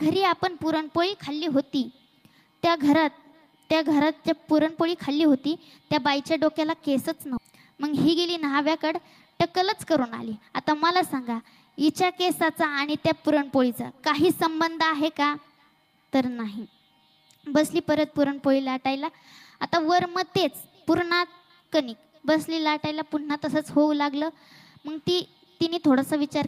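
At 7.37 to 7.39 s there is a skip ahead. About 0.7 s of audio is simply missing. The stream had fallen behind, and a backlog of later audio was already waiting. That stretch was discarded rather than played. Nothing fills the gap. The sound on either side is butted together almost directly. It is heard as an abrupt jump forward. The delay of the stream drops by about the same amount.

From 9.32 to 10.71 s a jitter buffer speed-up follows. The receiver was holding more audio than its target. It trimmed many tiny pieces, each one or a few pitch periods long, to shrink that excess. Roughly a tenth of a second is removed in total. Playback runs at about 107% speed. The pitch stays the same. The passage sounds slightly rushed and compressed.

At 20.98 s a dropped buffer is heard. A very short piece, only a few milliseconds, vanishes with no silence in its place. The two edges are spliced directly together. 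The result is a tiny jump in the sound. The likely cause is an overrun, where samples were not collected before the hardware overwrote them.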